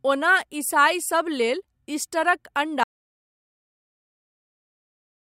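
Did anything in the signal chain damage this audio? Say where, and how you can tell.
Yes. There is an audio dropout to silence starting at 2.84 s, just after "ईसाइ सब लेल ईस्टरक". The speech stops mid-flow and never returns. From there to the end the signal is silent, with no room tone or noise floor left. That rules out a quiet passage or a gate. The stage is likely the input side, a lost device or link, while the recorder kept writing empty samples.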